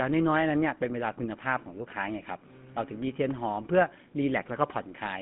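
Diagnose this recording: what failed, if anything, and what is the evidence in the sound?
Codec stage: GSM full-rate coding throughout, with plainly audible buzzy, gravelly roughness and a 150 Hz to 3.5 kHz band. A coarse pulse-driven excitation fits a 13 kbps coder.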